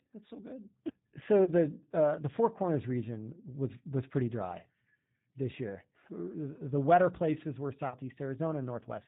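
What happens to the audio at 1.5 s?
A single VoIP packet, about 30 ms of speech, was lost, and the G.729 decoder's packet loss concealment filled the gap from roughly 1.44 to 1.51 s. It extended its last pitch and filter settings with falling gain, which fits one dropped packet. The result is a brief buzzy or noisy, fading smear, and the voice sounds weak or distorted as it recovers into "the uh the".

The whole clip also runs through the 8 kbit/s G.729 codec, which rebuilds speech from a vocal tract model and a few pulses per frame. Everything above 4 kHz is cut, so around this moment the speech sounds band-limited, slightly rough and synthetic.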